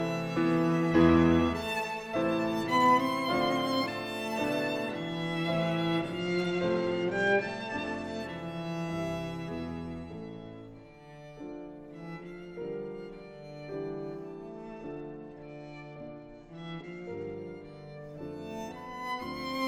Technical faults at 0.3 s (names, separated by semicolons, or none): none